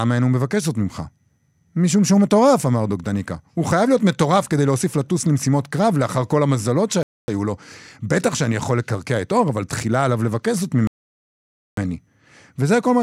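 At 7.03 s the speech drops to silence for 0.25 s, then again from 10.87 to 11.77 s for 0.9 s, resuming each time; likely a Bluetooth stall from a drained receive buffer.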